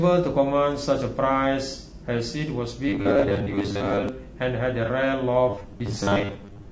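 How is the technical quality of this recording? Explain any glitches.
Quality's fairly rough: the speech has a constant coded graininess, plus a few short dropouts and two stretches of buzzy, robotic sound.

Throughout, the voice sounds grainy and rough, with hiss between the harmonics and a thin, synthetic top end. That's likely low-delay AAC compression (AAC-ELD), whose short frames resolve pitch poorly. The amount of damage points to a low bitrate, around 32 kbps.

AAC frame loss with concealment turns up at about 1.70 s, 3.20 s and 4.85 s, each a brief smeared, noisy blip lasting about 30 ms. A frame went missing, and the decoder patched the gap by reusing the previous spectrum with scrambled detail.

From 2.89 to 4.09 s and from 5.5 to 6.71 s there's robotic sound from repeated short buffers: a rigid metallic buzz at 100 Hz. Audio is likely arriving too seldom, so roughly 10 ms chunks get replayed, with about half the sound replaced.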